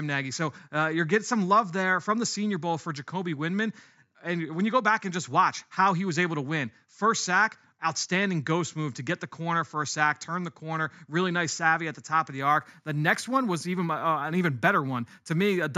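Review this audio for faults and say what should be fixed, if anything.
From 12.41 s to the end, the speech shows imaging from linear upsampling. The top of the band dulls and a faint metallic shimmer rides on sibilants. Straight-line interpolation, which fits 16 kHz audio raised to 48 kHz, leaves mirrored spectrum copies between 8 and 16 kHz, around 30 dB down. Unlike aliasing, which folds energy downward into the band, these images sit only above the original 8 kHz edge. Prevent it by resampling with a proper windowed-sinc or polyphase low-pass filter.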